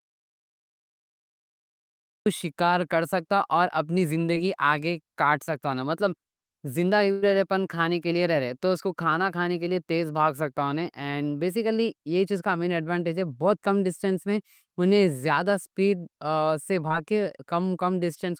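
The input to the recorder was likely lost at the start of this speech recording, so from 0 to 2.26 s the file holds silence with no room tone, and the talking is already under way when the sound arrives. The audio dropout to silence erases whatever came before. Short concealed packet loss follows three times, at 2.41 s just before "کر سکتا", at 4.35 s just before "آگے کاٹ سکتا مطلب", and at 16.9 s. Each time about 20 ms of the stream never reached the decoder, and the receiver extended the previous sound to cover the hole, leaving a tiny smear. A burst of packet loss at 7.12 to 7.24 s removes roughly 100 ms of audio. The receiver bridges the whole gap with a fading continuation of the last sound, with no silence, and speech resumes a little further on.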